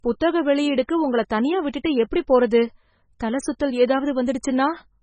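Speech that carries heavy MP3 compression damage from start to finish, most likely from encoding at a very low bitrate, which fits something around 16 kbps. The sound is watery and swirly, sibilants turn metallic and chirpy, and consonant attacks smear. On a spectrogram the energy stops at a hard, flat ceiling near 9.4 kHz, and below it the harmonics break into patchy blocks that flicker on and off from frame to frame.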